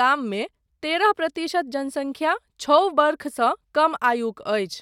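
Listening through the speech recording, nothing stood out as a technical fault at any point.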